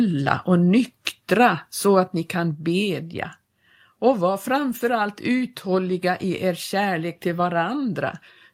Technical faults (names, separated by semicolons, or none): microphone volume stepped down